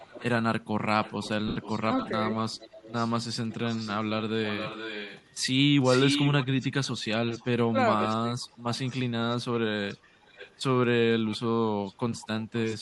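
Throughout the speech there is a breathy, grainy edge on the voice, with the top of the band thinned and replaced by a hiss-like texture. It is plainly audible and is most likely Bluetooth LC3 compression at 48 kbps. The transform codec works in 10 ms frames. When bits run short it zeroes large parts of the upper spectrum and fills them with noise, which gives that rough sheen.

From 0.0 to 0.25 s a faint, delayed copy of the voice trails behind, well below the direct sound. It returns much louder from 1.03 to 7.47 s, lagging by about 0.47 s and only around 10 dB down. Brief scraps follow at 8.01 to 8.07 s, then quieter stretches at 8.63 to 10.59 s and 11.29 to 12.75 s. Across these the lag creeps from roughly 0.45 s to 0.5 s. This is echo leak. The likely cause is a far end playing the call on a loudspeaker whose echo canceller let part of its microphone pickup return down the line.

From 1.48 to 1.56 s the voice smears into a noisy, blurred patch lasting 80 ms, which fits eight lost 10 ms frames. 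These are lost LE Audio frames. The decoder reused the last good spectrum with randomised signs to bridge the gap, so the tonal content of the voice dissolves into that smear.

Between 7.69 and 8.44 s the voice dips, about 0.3 s in total, falling by roughly 25 dB at its deepest. This is speech suppressed in double talk. The likely cause is both sides talking at once, so the echo canceller could not separate the real talker from loudspeaker echo and pulled everything down together.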